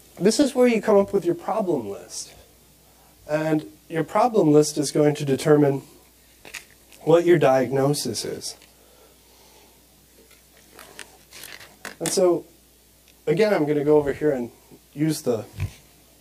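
From about 0.42 s right through to the end there's channel delay, so comb filtering: one side lags the other by roughly 20 ms before the mono sum, carving regularly spaced notches from around 30 Hz upward. It sounds rough and slightly doubled throughout.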